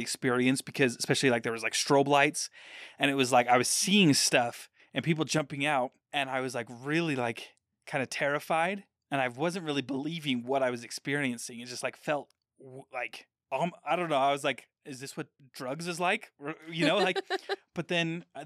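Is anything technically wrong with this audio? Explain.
Yes. At 5.39 s, just after "seeing stuff and people", there is a sudden gain jump: the level drops by about 6 dB in a single step and stays there until the clip ends. The speech and the background noise fall together, which points to a change in digital gain rather than anything at the source. This is likely a gain setting or bit shift applied without a ramp, so the level changes abruptly from one sample to the next.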